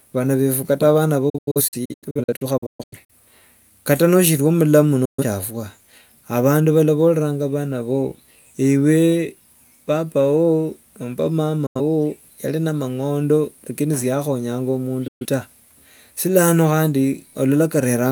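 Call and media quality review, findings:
Digital broadcast dropout: receiver lost sync or rejected corrupt frames and muted. Speech cuts out with fast 8 ms fades, 1.29–3.10 s as scattered holes (longest 128 ms, roughly 0.77 s lost), then 5.05, 11.66 and 15.08 s, about 0.09–0.13 s each. Missing audio never returns.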